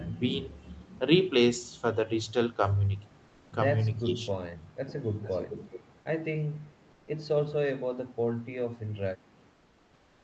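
A speech recording carried over a call, with nothing above 8 kHz, as expected from its band-limited call path. At 0.97 to 0.99 s a tiny slice of the speech vanishes and is briefly replaced by flat noise, so about 10 ms of real sound is lost. This is sound dropped by the voice detector: the sender likely judged that fragment to be background, stopped sending, and the receiver filled the gap with generated noise until detection resumed. From 3.27 to 3.51 s, and again from 9.53 s to the end, the natural room background turns into a smooth, featureless hiss, about 2 dB quieter in the first stretch and about 5 dB quieter in the second. That is comfort noise in place of the background, likely from discontinuous transmission of the Opus kind: with no speech detected, the sender goes silent and the receiver synthesises noise roughly matching the background's level and colour, losing its real texture. 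Between 4.01 and 4.10 s the speech briefly sinks, by something like 15 dB at its deepest, for roughly a tenth of a second. This is speech suppressed in double talk, likely because the echo canceller, faced with both ends active at once, could not separate the talker from the loudspeaker echo and turned everything down. Finally, faint delayed repeats of the voice trail behind it from 4.87 to 5.02 s and from 5.22 to 5.82 s, lagging by 417 ms, about 20 dB and then about 15 dB below the direct speech. That is echo leak: likely a loudspeaker at one end fed sound back into its microphone, and the canceller failed to remove all of it.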